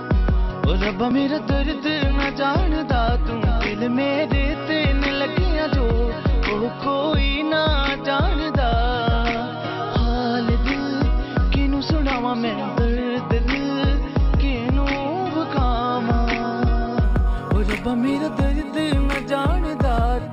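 From 17.04 s to the end, imaging from linear upsampling: 12 kHz audio raised to 48 kHz by straight-line interpolation dulls the top and leaves faint mirrored images between 6 and 12 kHz, roughly 35 dB down, heard as metallic shimmer.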